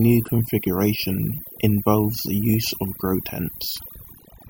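Overdone noise removal runs throughout: an over-aggressive noise reducer cuts bands near its noise estimate, leaving a twinkling near-silent background and taking quiet parts of the voice with it.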